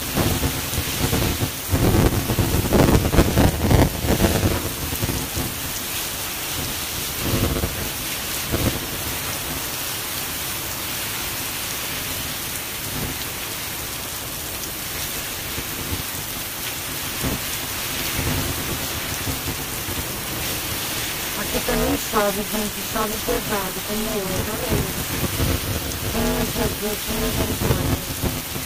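From start to finish there's buffer tearing, a steady robotic rattle at about 200 Hz that only shows up while there's sound playing. The writer and the hardware reader on the ring buffer have drifted so they cross in every 5 ms period. Most of each chunk, something like two thirds or more, is stale audio from roughly 10 ms back, spliced in with hard edges on both sides, and those joins repeating 200 times a second are the buzz.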